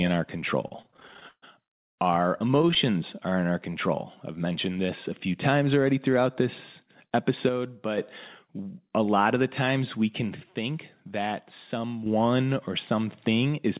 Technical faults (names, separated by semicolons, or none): repeated stalls (stutter); call audio freeze; jitter buffer slow-down; jitter buffer speed-up; one channel drops out